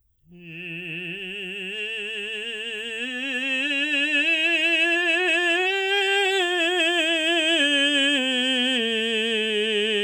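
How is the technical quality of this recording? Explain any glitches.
The music recording has no audible technical glitches; the signal holds steady throughout without any interruptions or defects to report.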